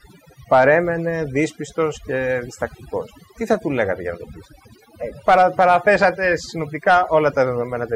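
From the first moment to the last, this speech has overdone noise removal. Someone pushed a noise reducer much too hard on a noisy recording, so any frequency band that sits close to its idea of the noise gets pulled way down or shut off entirely, and the softer parts of the voice get caught in that too. You hear the background drop away and break up into little twinkling, warbling specks.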